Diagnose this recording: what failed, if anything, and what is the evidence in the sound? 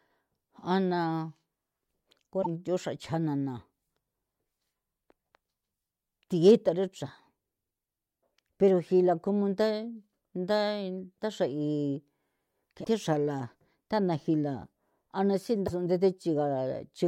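Codec stage. Brief skips and glitches at 2.41–2.47 s, 12.83–12.87 s and 15.66–15.70 s, the last after "a na". Likely a broken MP3 bit reservoir: after lost frames, the decoder reads the wrong bytes.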